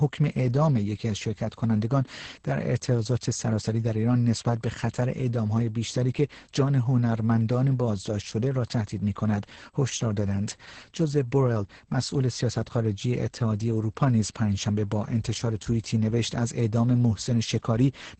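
Throughout, the speech carries Opus voice compression. Nothing above 8.8 kHz survives. Coarse SILK coding sounds muffled, hoarse and robotic, which fits about 10 kbps.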